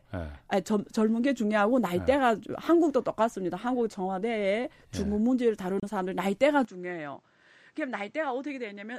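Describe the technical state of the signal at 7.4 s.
From 6.65 s to the end, spanning 7.4 s, the speech loses everything above 8.8 kHz, falls about 10 dB and gains new noise about 30 dB down, with no gap. Likely an input switched to a poorer device, since plain filtering adds no noise.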